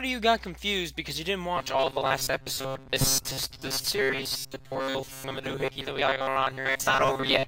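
From about 1.57 s right through to the end, the sound goes robotic, the classic robotic sound from repeated short buffers. It takes on a rigid, metallic buzz pitched at 134 Hz, which fits a chunk of roughly 7.5 ms being replayed over and over. The likely cause is fresh audio arriving too slowly, so playback keeps looping the last little piece. Most of the material gets replaced this way, so only the broad shape of the original survives underneath the buzz.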